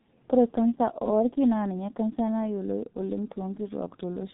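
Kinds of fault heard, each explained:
G.723.1 codec: the whole speech clip comes through a very low-rate telephony codec, near 6.3 kbit/s, so nothing survives above 3.9 kHz and consonants blur into a hoarse, muffled smear. Unlike a plain low-pass filter, which only dulls the sound, this damage also roughens the voice itself, because the coarse voice model updates too slowly.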